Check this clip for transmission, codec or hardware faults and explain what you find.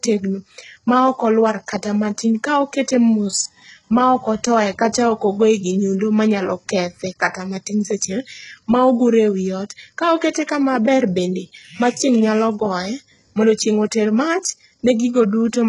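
One codec fault runs through the whole clip. HE-AAC compression, throughout: the treble up to about 11.1 kHz, with nothing above it, is likely rebuilt from copied lower bands, which fits a very low bitrate near 12 kbps, so sibilants sound gritty and metallic.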